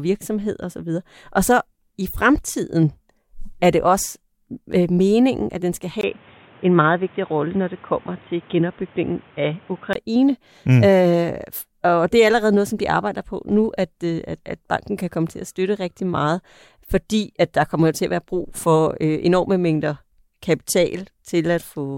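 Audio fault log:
6.01–9.95 s: input switched to a poorer device. Right after "meningen at den skal", the capture path likely moved to a lower-grade microphone or a headset's call profile, which passes nothing above 3.8 kHz. The speech abruptly loses its upper range and turns dull and boxy, with a brief 20 ms gap at the switch and a new noise floor sitting roughly 30 dB under the voice. Loudness stays about the same, so the change is heard as tone and noise, not level, until the clearer sound returns near 9.95 s.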